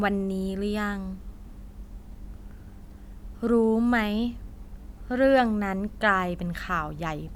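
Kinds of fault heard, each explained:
Nothing stood out on listening to this speech recording.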